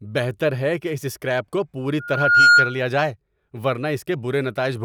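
From 1.99 to 2.79 s there is loudspeaker feedback squeal. The microphone picks up its own loudspeaker. A 1.4 kHz tone swells quickly, rising well above the speech.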